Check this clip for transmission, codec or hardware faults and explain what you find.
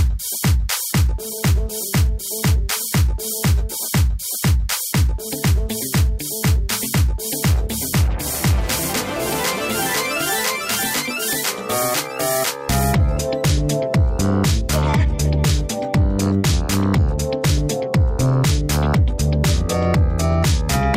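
Nothing stood out on listening; no transmission, codec or hardware problem could be heard anywhere in the audio.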